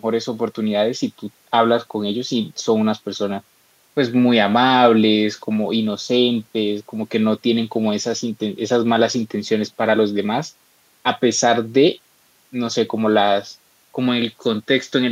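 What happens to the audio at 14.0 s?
Nothing goes wrong at 14.0 s; the speech continues intact through that moment.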